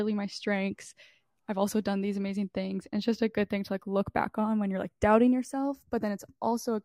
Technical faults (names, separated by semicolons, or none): channels drifting apart